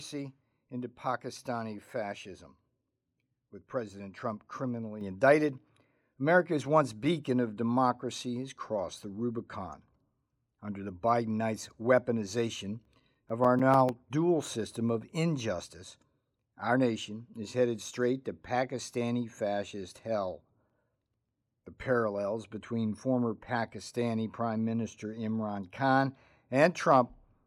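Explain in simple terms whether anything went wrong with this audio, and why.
At 5.01 seconds the speech suddenly gets louder, and the background noise jumps up with it in the same instant. That is a microphone volume stepped up: the calling software decided the microphone was too quiet and turned its input level up in a single jump instead of gradually. Because the whole signal goes up together, voice and room alike, it sounds like someone nudged a volume knob.

Later there are two bursts of quick, regular ticks, like a ticking clock. The first runs from 12.70 to 14.18 seconds with eleven ticks, and the second from 20.25 to 21.29 seconds with eight. These are CD scratch ticks. A mark on the disc wipes out more data than the player can repair, once per turn of the disc, so it patches over each tiny gap. Each patch lasts only a few thousandths of a second, about seven or eight times a second.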